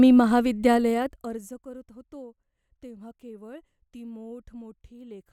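From 0.73 to 1.66 s, zipper noise ticks over the speech. The level falls about 25 dB in unsmoothed 1 dB steps, roughly twenty a second.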